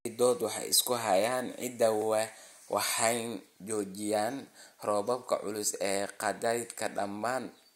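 A block of digital silence at 2.02 s: for about 0.67 ms, consistent with a 32-sample block, the audio drops abruptly to silence and back, heard as a tick or dip.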